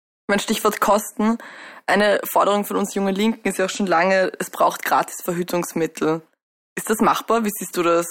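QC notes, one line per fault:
Nothing stood out on listening.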